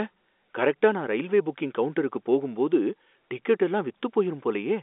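No technical faults can be heard anywhere in the speech. It carries the narrow sound of a telephone line coded with G.711, with energy confined to roughly 250 Hz to 3.6 kHz and nothing above about 3.8 kHz, which fits A-law coding at 64 kbps.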